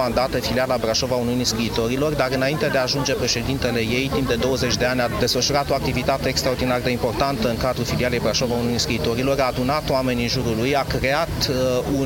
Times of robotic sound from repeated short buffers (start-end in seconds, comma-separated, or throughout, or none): none